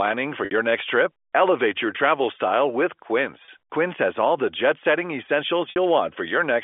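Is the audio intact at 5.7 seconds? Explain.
No. From 5.70 to 5.76 s, about 60 ms of audio is lost to packet loss with pitch repetition. The receiver loops the last pitch period and fades it, giving a brief held, buzzy tone. The waveform shows identical repeating cycles shrinking in amplitude, and the spectrogram shows flat, frozen harmonic bands.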